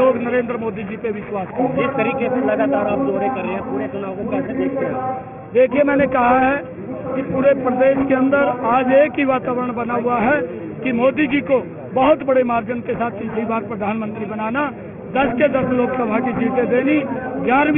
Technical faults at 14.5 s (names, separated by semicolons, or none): aliasing